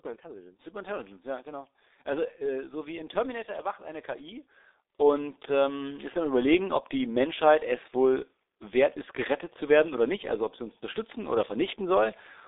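From start to finish the speech passes through a G.723.1 codec, an early low-rate telephony coder, and the damage is heavy. Nothing reaches above about 3.8 kHz, and the band sits roughly between 300 Hz and 3.7 kHz, so the voice is muffled and thin. What separates it from ordinary telephone band-limiting is the coarse 30 ms frame modelling: a hoarse, buzzy texture and smeared consonants, consistent with a rate near 6.3 kbit/s.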